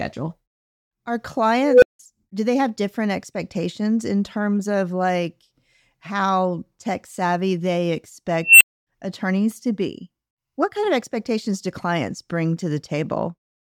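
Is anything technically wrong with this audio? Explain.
Yes. An unstable filter fires twice, at 1.62 to 1.99 s and 8.44 to 8.86 s. A recursive filter with bad coefficients feeds back until its output runs away. A tone near 500 Hz, then near 3 kHz, swells over 0.2 s and 0.17 s, clips, and drops to silence for 0.17 s and 0.26 s, interrupting the speech.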